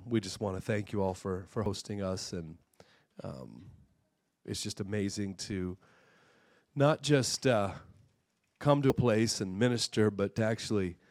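At 1.66 s there's a sudden jump forward in the sound, and the same thing happens again at 8.9 s, each time skipping something like 70 ms. A shorter skip follows at 10.38 s, only about 20 ms. There's no gap of silence at any of them. The two sides just butt together. That's likely a dropped buffer (overrun), where the hardware overwrote samples before the software read them, so those chunks are simply gone.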